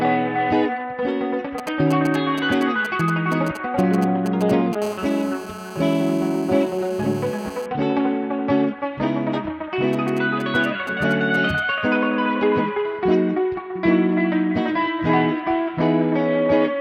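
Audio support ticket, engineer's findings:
GSM signalling bursts, 1.58 to 4.75 s and 9.93 to 11.60 s. Galloping dit-dit-dit of short 217 Hz buzz fragments, roughly 10 dB and 15 dB below the audio. Nearby 2G handset keying brief burst groups while signalling; the audio input stage rectifies the RF pulses. Distinguished from the continuous buzz by its broken, clustered rhythm. The buzz never settles into a steady tone.

GSM phone buzz, 4.82 to 7.66 s. Hard, raspy, harmonic-rich buzz at 217 Hz, about 18 dB below the audio. It is nearly steady and unrelated to the program. The handset is in a call and transmits bursts 217 times a second, which the audio circuitry rectifies. It follows straight on from the first signalling episode. Unlike mains hum, the fundamental is 217 Hz, not 50 or 60 Hz, and the tone is buzzy rather than smooth.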